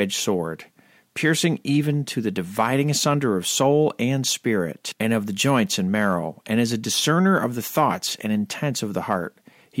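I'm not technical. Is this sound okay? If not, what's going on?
Yes, nothing stood out as a problem when listening to this recording.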